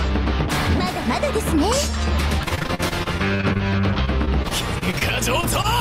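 From 2.43 to 3.61 s there is repeated packet loss, giving a choppy, robotic sound. Fourteen separate holes are patched by extending the preceding audio, each followed soon by the next. The longest gap is 41 ms, concealment fills roughly 29% of the stretch, and about 260 ms of real audio is missing. The same fault returns from 4.05 to 5.03 s with seven gaps, the longest 27 ms, concealment covering about 14% of that span and roughly 140 ms lost.

At 5.41 s comes a short stall from a late packet. The jitter buffer ran dry, the receiver stretched the last sound by 17 ms until the packet arrived, then resumed where it left off. Nothing is lost, but the sound is held slightly too long.

At 5.62 s there is a short concealed packet loss. About 20 ms never arrived in time, so the receiver continued the previous sound across the hole for roughly 23 ms and blended back into the real signal. It is heard as a brief smear.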